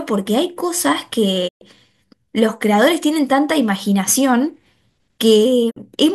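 At 1.47 s and 5.69 s, a digital broadcast dropout mutes the speech for 120 ms and 48 ms: the receiver lost valid frames and silenced output. A brief fade, not a click or a smeared repeat, marks it.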